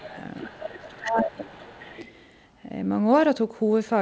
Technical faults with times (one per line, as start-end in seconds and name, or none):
0.00-0.09 other side's voice leaking through
0.00-0.17 speech suppressed in double talk
0.35-2.07 other side's voice leaking through
0.47-1.74 speech suppressed in double talk